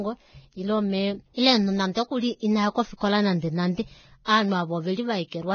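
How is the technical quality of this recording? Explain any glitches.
The speech is heavily degraded by low-rate compression, with three brief pre-echo smears.

Throughout, nothing is present above 6.5 kHz, and the treble is hissy and grainy. This is likely Vorbis compression at around 18 kbps, with coarse quantisation turning detail into noise, unlike plain low-pass filtering, which would sound dull but clean.

Pre-echo occurs at 1.92–1.96 s, 2.97–3.01 s and 4.25–4.27 s, each lasting about 30 ms. The block's quantisation noise spreads ahead of sharp onsets as a short hiss before the attack, rather than a click on it.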